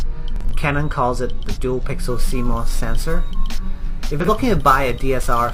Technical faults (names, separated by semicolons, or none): corrupt frame concealed; sample clock jitter